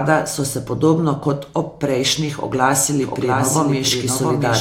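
From 3.02 s to the end there's a doubled audio track: a flat, somewhat quieter copy trails about 0.7 s behind, likely from a second, slower capture path.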